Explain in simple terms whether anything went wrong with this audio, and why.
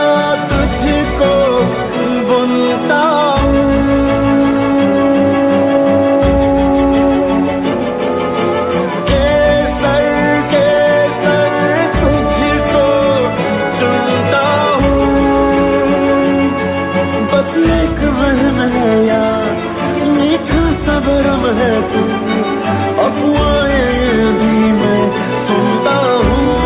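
Nothing went wrong here; there's no glitch, dropout or distortion anywhere to point to.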